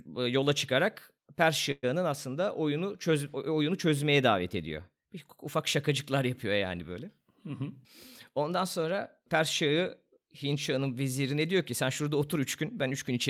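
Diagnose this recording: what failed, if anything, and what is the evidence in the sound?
Network stage, call audio freeze: at 1.71–1.85 s the sound stretches into a fading buzz, then about 20 ms of silence, and resumes intact, likely a jitter-buffer underrun rather than packet loss.

Buffer stage, jitter buffer speed-up: from 8.29 to 9.69 s the speech runs about 7% faster at unchanged pitch, trimming roughly a tenth of a second, unlike resampling, which would raise pitch.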